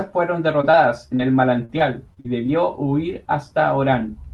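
From 0.61 s to 2.50 s, packets kept going missing or arriving too late, producing repeated packet loss (robotic sound). The receiver bridged eight separate holes, the longest about 40 ms, by stretching out the last sound it had. About 11% of that stretch, roughly a third of a second, is rebuilt audio. The speech turns choppy, with small pieces dropping out.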